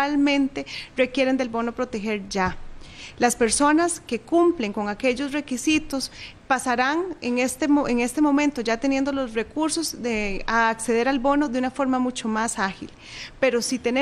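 No technical faults are audible.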